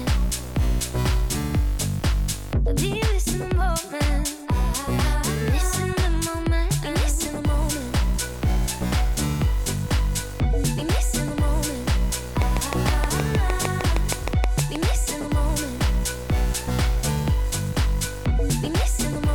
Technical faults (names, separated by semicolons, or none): train of clicks; block size mismatch (truncated)